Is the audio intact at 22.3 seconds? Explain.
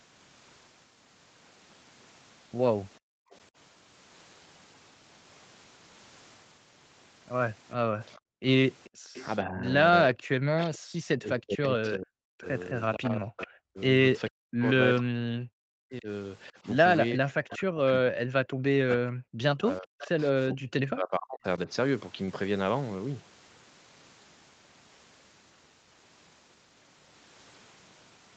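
No. A short stall from a late packet at 22.26–22.30 s: the jitter buffer ran dry, so about 21 ms was stretched, briefly holding the sound with a faint buzz or dip, with nothing lost.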